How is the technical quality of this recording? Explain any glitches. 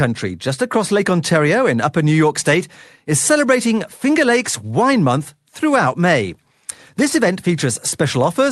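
No glitches or dropouts heard.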